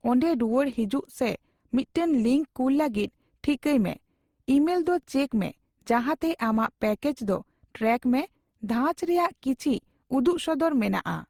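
Throughout this speech clip the sound is swirly, smeared and hollow, with blurred attacks, pointing to generation loss, likely from around ten passes of Opus-style encoding near 64 kbit/s.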